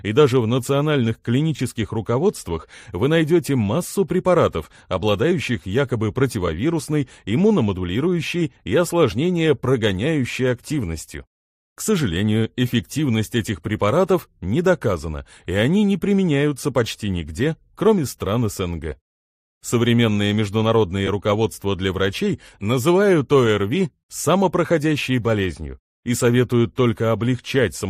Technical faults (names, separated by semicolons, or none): lost LE Audio frames